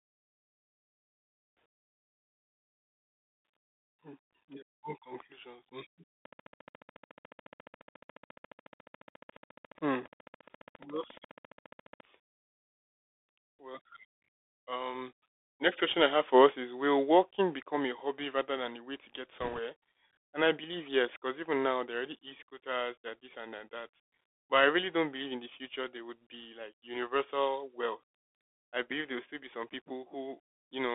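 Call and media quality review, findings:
Narrowband, muffled sound throughout, band roughly 300 Hz to 3.6 kHz, scratchy sibilants, granular hiss under speech. Bluetooth CVSD headset codec, fits a 64 kb/s link: one-bit delta coding with adaptive step cannot follow fast high-level changes, so slope overload distorts.

Train of clicks, 6.25 to 12.01 s: regular ticking at 14.3 per second, around 70 clicks, about as loud as the speech, audible in pauses too. Likely cause is periodic interference or a faulty connection or power supply injecting similar pulses.

Rushing, crackly noise burst, 19.40 to 19.60 s, no loud pops. Bit errors on a Bluetooth voice link, error rate around 1.5 percent, spread over many frames. Each flipped CVSD bit nudges the waveform only one step and decays, giving noise rather than clicks.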